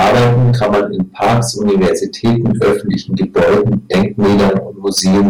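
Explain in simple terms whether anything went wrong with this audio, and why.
The speech is affected by hard clipping from start to finish. It was pushed much louder than the recording chain could carry, so the tops of the waveform were sliced flat, and roughly a fifth of the sound sits pressed against that ceiling. The flattened peaks add a harsh, buzzy fuzz on every loud moment. Unlike the smeared, watery sound of heavy compression, this distortion rises and falls with loudness and is harshest on strong syllables.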